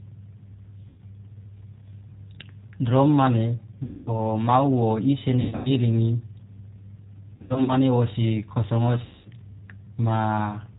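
Throughout, the speech carries G.729 codec damage: at 8 kbit/s the voice is rebuilt from a vocal tract filter, pitch predictor and a few pulses per frame, so nothing above 4 kHz survives and it sounds rough and synthetic, without the watery swirl of transform-codec artefacts. VoIP packet loss concealed by the speech codec then hits at 0.88–1.00 s (100 ms lost), 3.83–4.20 s (240 ms), 5.41–5.70 s (200 ms scattered), 7.36–7.73 s (180 ms scattered) and 9.05–9.28 s (200 ms). Each time the decoder stretches its last pitch and filter into a fading buzzy tone or coloured noise, and the voice stays weak for a moment afterwards, unlike a clean dropout to silence.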